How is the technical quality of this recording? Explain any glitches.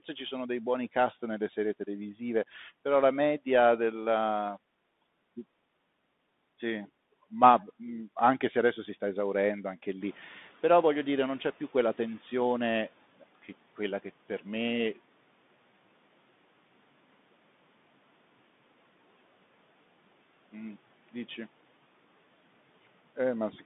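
The recording has two clear technical faults: narrowband Bluetooth headset coding for its whole length, and a stretch where background noise breaks through before being pulled back down.

The Bluetooth CVSD headset codec shapes the entire clip. The audio sits in a band of roughly 150 Hz to 3.6 kHz, with nothing above 3.8 kHz, which fits a 64 kbps CVSD link. The codec sends one up-or-down bit per sample with an adapting step. Fast, loud high-frequency sounds outrun that step, so sibilants turn scratchy and a grainy hiss rides under the speech. Ordinary band-limiting would sound dull but clean. The slope distortion and granular texture point to CVSD specifically.

The noise suppressor catching up is audible from 10.0 s to 13.05 s. Around 10 s the room noise jumps by about 11 dB and then settles about 27 dB below the speech. The suppressor's noise estimate takes about 3.05 s to follow the jump, so the new noise first leaks through with less reduction and then sinks by about 11 dB as the estimate adapts. 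A steady noise floor would not fade like this. A pumping gate would track the speech rather than making one smooth decline.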